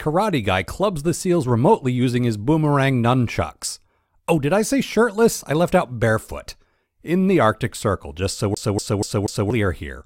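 Speech clip with a CD stuck on one turn from 8.55 to 9.50 s, just after "just so": a 240 ms segment repeats four times, each jump briefly muted.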